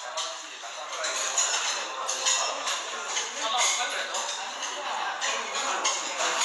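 A recording of everyday sounds that is dull from start to finish, with nothing above 11.5 kHz and a plainly audible rough, fluttering noise around tonal parts. The likely cause is Dolby Digital compression at a low bitrate, consistent with about 64 kbps, narrowing the band and dither-filling lines left without bits.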